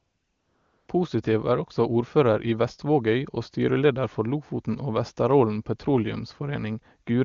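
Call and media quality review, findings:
AMR comfort noise, 0.00–0.87 s. Opening background replaced by a steady, smooth synthetic hiss. Sender's voice activity detection judged the line silent and sent no speech frames. Receiver synthesised noise from a coarse level and spectrum description. Unlike ordinary line hiss, it has no texture variation and switches off abruptly where real frames resume. AMR wideband (HD Voice) codec path shows no roughness or raspiness, consistent with the top 23.85 kbit/s mode.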